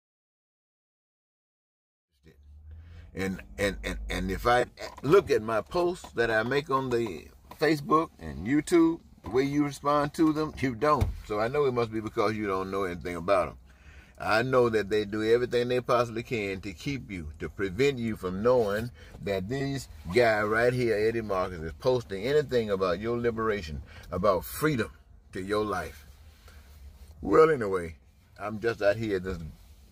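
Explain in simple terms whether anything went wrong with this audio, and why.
Three short spots at 1.98–2.09, 4.60–4.81 and 17.01–17.11 s are corrupt frame concealed: the decoder caught damaged data and patched it.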